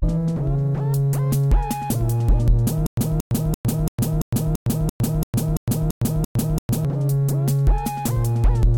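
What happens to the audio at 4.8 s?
At 4.8 s the music is caught in a stutter with silent gaps, running from 2.87 to 6.85 s. A 229 ms fragment repeats 12 times, each followed by 108.5 ms of digital silence. It pulses every 338 ms. A stalled stream, likely, replayed its last buffer at each retry.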